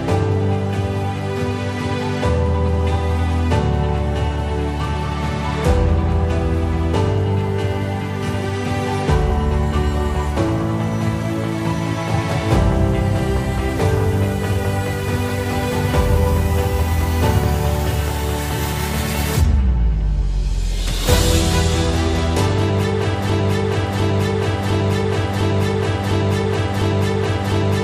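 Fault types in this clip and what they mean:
Broken-record loop: From 23.3 s to the end, a single 0.70 s fragment repeats exactly, back to back, six times. The audio that should have played there is lost. The likely cause is a stalled player, encoder or stream resending its last fragment.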